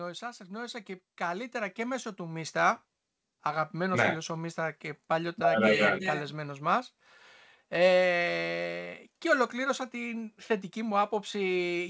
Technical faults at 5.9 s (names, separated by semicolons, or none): none